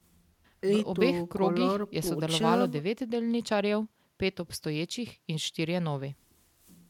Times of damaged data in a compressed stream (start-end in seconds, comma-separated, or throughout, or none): none